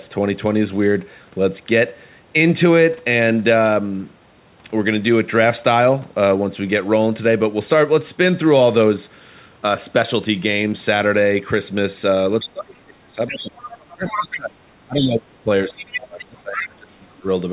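Things go wrong late in the clip, from about 12.4 s. At 12.39 to 12.45 s a brief scrap of a second, quieter voice slips in, roughly 15 dB under the main talker. That's the other side's voice leaking through, most likely loudspeaker echo that the echo canceller didn't fully strip out of the microphone. It comes back as longer, slightly stronger stretches, around 10 dB below the talker: 13.27 to 14.38 s, 14.95 to 15.13 s, and 15.74 to 16.64 s. Each is a separate voice sitting underneath.

Overlapping that, the main speech keeps ducking. From 12.44 to 13.57 s it sinks hard, at its deepest something like 30 dB, for about a second in total. It happens again across 13.96 to 17.27 s, adding up to roughly three seconds of dips and cut-outs. This is likely speech suppressed in double talk: with both sides active, the canceller can't tell the near talker from the echo and turns everything down. The talker sounds like they're fading out or dropping away in chunks. 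All of this sits within the narrow, telephone-band sound of the call path, which has nothing above 4 kHz.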